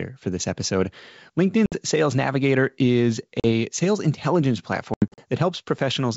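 Packet loss on an ADPCM call cuts hard-edged silent gaps at 1.66–1.80 s (60 ms), 3.40–3.45 s (40 ms) and 4.94–5.22 s (160 ms scattered). The waveform drops to silence, and the speech returns slightly distorted as the decoder's predictor resyncs.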